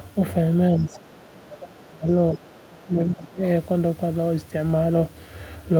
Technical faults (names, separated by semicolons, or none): other side's voice leaking through; speech suppressed in double talk